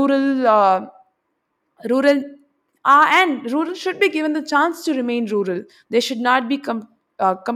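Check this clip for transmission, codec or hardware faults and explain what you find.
No transmission, codec or hardware faults are audible in this speech clip.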